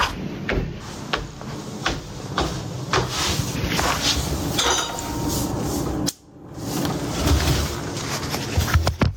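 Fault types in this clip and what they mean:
Gain pumping: the level gets pulled down hard the instant anything loud comes in, with the level swinging by about 25 dB. That back-and-forth runs through the whole clip. It's likely a mic gain cranked way too high with a fast limiter or compressor clamping down on each peak, so loud and soft parts get squeezed close together and everything sounds squashed and breathing.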